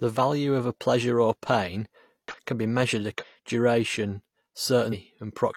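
Speech clip with damaged data in a compressed stream: brief glitches at 2.28–2.35 s (after "a pleasure or pain"), 3.18–3.24 s (after "can be measured") and 4.89–4.94 s, where the decoder misreads corrupted frames and loses sync.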